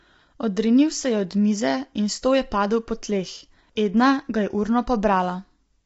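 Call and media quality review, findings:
Rough, grainy speech, whole clip start to end. Nothing above 7.8 kHz, top band dull. Noise filling in between harmonics, damage plainly audible. Likely low-delay AAC compression (AAC-ELD, video-call codec). Short frames can't pin down the pitch harmonics, so at low bitrate coding noise spreads between them. The grit fits a low bitrate, around 24 kbps. Check call encoder settings, bump bitrate if the link allows.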